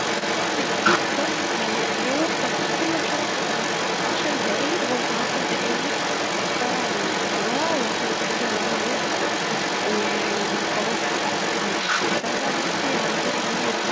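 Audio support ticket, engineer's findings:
Other side's voice leaking through, 0.0 to 13.9 s, whole clip. Second voice present throughout, roughly on a par with or slightly above the near talker. Likely cause: residual acoustic echo, far-end loudspeaker playback picked up by mic and not cancelled by echo canceller. Echo sits inside same 8 kHz band as near speech, consistent with pickup before G.722 encoding.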